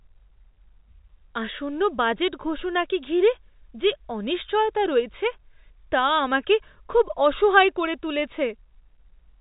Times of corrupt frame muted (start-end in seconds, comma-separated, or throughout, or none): none